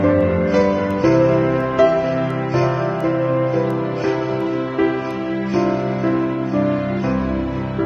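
A digital link is being read by a receiver running on its own clock rather than locked to the sender's, and the two clocks differ by something like 30 parts per million. From 0.21 s to 7.21 s they slip past each other at regular intervals, and each slip drops or repeats a single sample. The result is word clock ticks: roughly ten sharp clicks of uneven strength, recurring about every 0.7 s.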